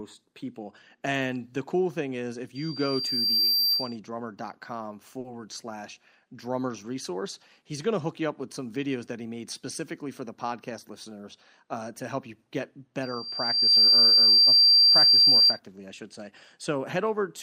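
From 2.55 to 3.96 s a loudspeaker feedback squeal appears: a microphone is hearing the loudspeaker it drives, and the loop gain at 4.7 kHz passes unity. The tone swells over about a second to roughly 10 dB above the speech before it stops.

At 5.19 to 5.26 s there is a short stall from a late packet. The jitter buffer ran dry, and the receiver stretched the last sound by 50 ms until the packet came, so nothing is lost but a sound hangs slightly too long. The added 50 ms of delay stays after the event.

Between 10.08 and 10.91 s a jitter buffer speed-up trims the surplus. Around 50 ms of pitch periods are cut out, so the speech runs at 105% speed with unchanged pitch and sounds faintly rushed.

The feedback squeal returns at 13.02 to 15.59 s on the same 4.7 kHz tone. It builds faster this time, in under a second, reaches roughly 15 dB above the speech, and lasts longer before it stops.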